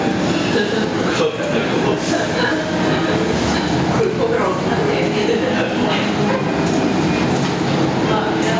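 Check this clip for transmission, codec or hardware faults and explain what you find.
One fault runs through the whole clip, heard within the call's microphone processing, which leaves nothing above 8 kHz. Gain pumping, throughout: the gain swings by roughly 10 dB, bringing loud and soft parts closer in level and squashing the sound, most likely from excessive input gain driving a fast limiter.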